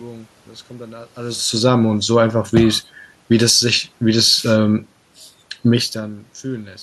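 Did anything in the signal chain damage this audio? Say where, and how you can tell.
Yes, one thing, and it sits in the call processing: automatic gain rising between about 3.59 and 4.02 s. Voice and room noise swell together by about 4 dB over that stretch, which is the giveaway. When a talker shifts position, as happens near 1 s and 5.5 s, only the voice changes level. Here the AGC decided the input was too quiet and ramped its gain up, dragging the background along with it.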